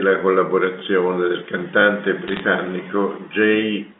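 At 0.80 to 0.82 s there is a stutter caused by overlapping chunks. Each new one-second chunk starts 20 ms before the last one ended. That sliver plays twice. The join gives a short click. It returns at 1.82 to 1.84 s.

From 2.28 to 2.41 s, crackle sits over the speech. These are bit errors on a digital phone line. Flipped bits corrupt single samples on the A-law telephone path. Hits on high bits make sharp ticks. The error rate sounds like a fraction of a percent.

At 2.84 to 2.86 s the overlapping-chunk stutter recurs with the same 20 ms repeat. Its one-second spacing matches the first two. This regularity marks a chunking fault, not a problem with the source.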